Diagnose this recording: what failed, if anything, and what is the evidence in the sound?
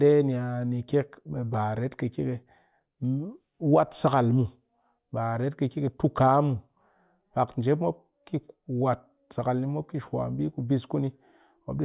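Nothing in this speech recording points to a failure. None of the stages, from wiring and conversion through transmission, storage and playback, leaves any audible trace.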